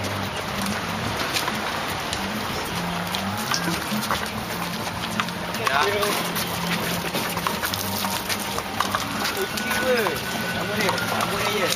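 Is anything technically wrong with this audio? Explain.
No, no technical faults detected.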